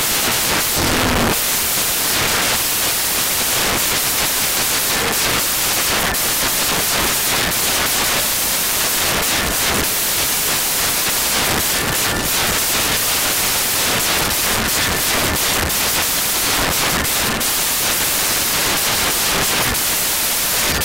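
Across the whole clip the audio plays as loud, harsh broadband noise, the signature of samples built from the wrong bytes. The decoder is assembling each sample incorrectly, through a one-byte offset, swapped byte order or a wrong alignment assumption. The rapidly changing low-order bits end up in the most significant position, so every value becomes essentially random.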